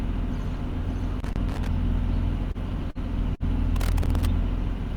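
From 1.20 to 1.68 s there is loose connector crackle: an irregular burst of scratching and pops laid over the sound. A worn or dirty contact is making and breaking as it shifts, chopping the signal and popping wherever DC sits on the line. Unlike the regular ticks of a clock or buffer fault, these bursts have no steady spacing, and the same ragged texture returns from 3.76 to 4.27 s.

Between those two bursts come three short stalls from a late packet, at 2.51, 2.90 and 3.35 s. Each time, the jitter buffer ran dry and the receiver held the last sound until the packet arrived, for about 28 ms, then 49 ms, then 50 ms. Playback then picks up exactly where it stopped. What sets this apart from packet loss is that no audio is missing: the sound is stretched with a faint buzz or dip, and everything after it lands slightly later.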